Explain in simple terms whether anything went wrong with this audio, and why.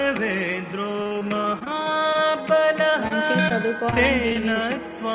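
Between 1.02 and 2.36 s, and again from 3.90 to 4.57 s, the sound turns choppy and robotic, with bits missing. This is repeated packet loss: chunks of the call kept failing to arrive, each hole (none longer than about 40 ms) was patched by extending the previous sound, and the next hole came soon after.

Overlapping that first stretch, from 1.69 to 2.67 s, the audio drags at about 93% speed, with the pitch unchanged. This is a jitter buffer slow-down: the receiver's reserve of incoming audio ran low, so it repeated tiny slices of sound to rebuild it, adding about 71 ms.

At 2.90 to 2.94 s and 3.49 to 3.52 s there are brief smears, where roughly 20 ms of sound is lost each time. These are short concealed packet losses: a short piece of the call never arrived in time, and the receiver guessed what belonged in the gap before blending back into the real audio.

From 3.08 to 3.12 s a sound is held a moment too long, though nothing is missing. 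This is a short stall from a late packet: the next packet arrived late, so the receiver stretched the last sound by about 27 ms, then carried on where it had stopped.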